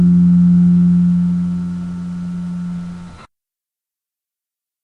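Listening closely to the recording, nothing stood out as a technical problem.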